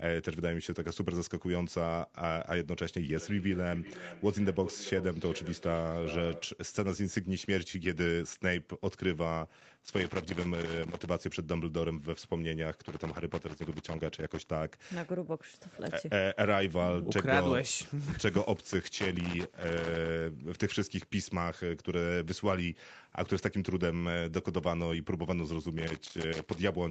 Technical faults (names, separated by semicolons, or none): feedback echo between two devices; loose connector crackle